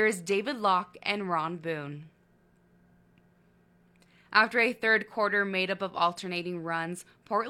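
At 5.02 s, an overlap between stream segments trims about 42 ms of speech at a segment boundary, so the waveform jumps and a brief skip is heard.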